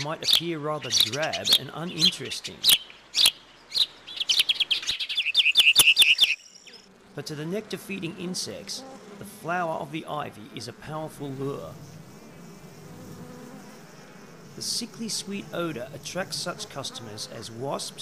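Integer overflow occurs at 0.34, 1.01, 1.53 to 1.55, 2.70 to 2.73, 3.26 to 3.28, 4.40, and 5.60 to 6.24 s. Each time, peaks were pushed about 1 to 3 dB past the integer limit and wrapped to the opposite sign instead of being held back. Each event is heard as a sharp crack, with the longest stretch a run of cracking. The waveform shows peaks abruptly jumping to the opposite polarity, and the spectrogram shows broadband vertical streaks at those instants.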